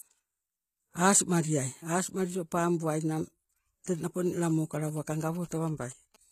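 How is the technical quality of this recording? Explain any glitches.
The recording has two clear problems: a coded sheen over the whole speech and a burst of phone interference near the end.

HE-AAC compression, likely: treble stops around 14.9 kHz and sounds rebuilt rather than real, so s sounds come out gritty and lispy, which suggests a low bitrate around 20 kbps.

GSM signalling bursts, from 4.26 to 6.16 s: a nearby phone's radio pulses get rectified, giving a galloping dit-dit-dit of short 217 Hz buzzes roughly 25 dB under the speech.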